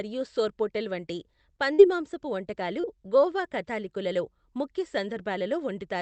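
Right after "సోర్పోటెల్ వంటి", at 1.73 to 1.80 s, there's a burst of packet loss: about 50 ms of the last sound is held and faded, then the speech skips ahead.

At 2.80 to 2.95 s, just before "గోవా కాథలిక్కులలో ముఖ్య", a short concealed packet loss leaves a brief smear where roughly 30 ms is patched over, with the timing stretched by a few milliseconds. Both sit on a call path whose 8 kHz top end fits Opus at around 24 kbps.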